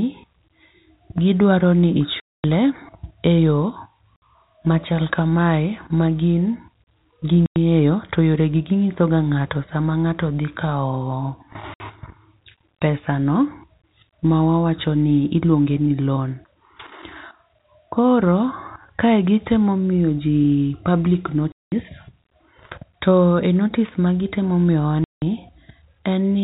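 Hard-edged silent gaps cut the speech at 2.2 s (after "gi dwaro ni", 240 ms), 4.16 s (before "machal ka", 60 ms), 7.46 s (before "to yore", 100 ms), 11.74 s (60 ms), 21.52 s (200 ms) and 25.04 s (180 ms). This is packet loss filled with silence: the receiver played silence for missing packets, and gap lengths in 20 ms steps suggest 20 ms packets. The speech stays within the 4 kHz telephone band of G.711 coding.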